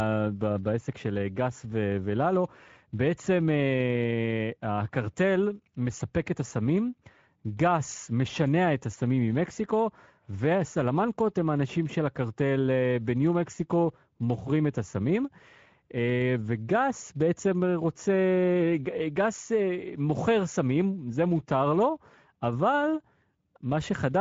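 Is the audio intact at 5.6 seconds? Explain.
No. At 5.6 s the speech carries Speex codec damage, which runs through the whole clip. This CELP coder has too few bits for the excitation, so the speech sounds noisy and hoarse, which fits about 16.8 kbps. Nothing remains above 7.7 kHz.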